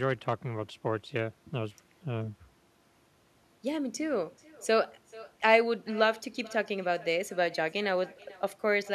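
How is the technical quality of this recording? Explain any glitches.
The recording is compromised by one fault that runs through the whole clip.

Echo with no canceller, throughout: the far end's loudspeaker feeds its microphone, returning the speech around 400 ms later at about 23 dB down. It sounds like a faint, thin shadow, and a spectrogram shows a weaker copy of every syllable trailing behind.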